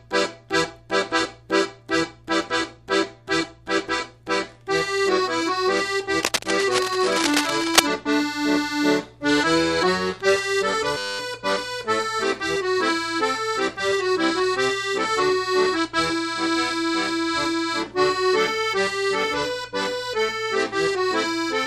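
Cable scratch noise runs from 6.23 to 7.82 s: dense, ragged bursts of scratching and rustling sit over the sound at roughly its own loudness. The likely cause is a worn cable, connector or control being moved, its contact resistance jumping rapidly.

A system hang loop follows at 10.98 to 11.19 s. The same 10 ms slice of audio repeats exactly, about 21 times, so the passage turns into a steady buzz at 100 Hz. This fits a stalled computer or driver while the hardware kept replaying one short buffer, with little or no audio lost around it.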